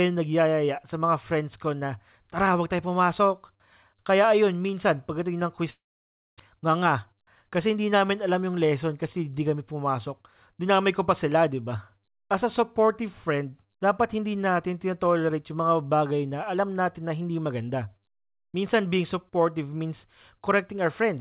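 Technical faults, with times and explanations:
5.70–6.42 s, long network dropout: the sound turns into a fading buzz, then silence, and resumes with 0.6 s missing, likely from packets that never arrived.
6.55–7.76 s, jitter buffer speed-up: the speech sounds hurried at 106% speed with the same pitch. The receiver cut short pitch-period pieces, about 70 ms in total, to shed excess delay.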